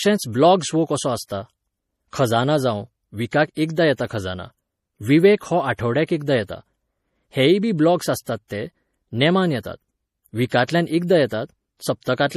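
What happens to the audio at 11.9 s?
At 11.9 s the speech carries the same coding damage heard across the entire clip, and it is plainly audible: a watery, swirling texture, metallic chirps on s sounds, and smeared consonant onsets. The likely cause is MP3 compression at a low bitrate, in line with roughly 40 kbps. Starved of bits, the encoder discards everything above 15.1 kHz and lets weak frequency lines drop in and out between frames. A spectrogram would show a hard ceiling at 15.1 kHz with speckled, flickering gaps beneath it.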